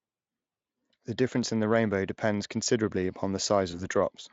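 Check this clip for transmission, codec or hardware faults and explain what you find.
One transmission fault is audible, a case of VoIP packet loss concealed by the speech codec. It runs from 3.71 to 3.81 s, right after "rainbow depends considerably upon". About 20 ms of audio went missing, which fits a single lost frame. The Speex decoder filled the gap by repeating its last pitch and filter with falling gain. The speech smears into a brief buzzy tone or coloured noise that fades. Because each decoded frame builds on the previous one, the voice stays weak or distorted for tens of milliseconds or more before it recovers. The Speex coding itself shows little or no audible damage.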